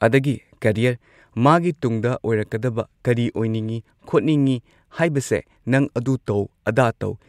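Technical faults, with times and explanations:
No technical fault stood out on listening to this speech clip.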